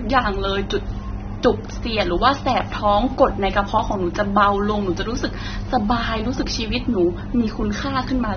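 Right from the start and all the way through, the speech has a dull, smeared quality with a fizzy warble on sibilants, and nothing comes through above 6.3 kHz. That's likely AAC compression, and the damage fits a low bitrate around 24 kbps that lowers the cut-off.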